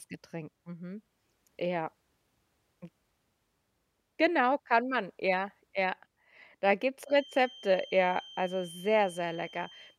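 A speech recording with a feedback whistle from 7.02 s to the end: a thin, steady tone at 3.1 kHz sitting roughly 20 dB under the speech. The likely cause is a loudspeaker-to-microphone loop held just at the edge of feedback, ringing at one frequency without growing. Unlike a fixed electrical tone or interference whine, its level swells and fades slowly, and it neither swells into a howl nor drops out.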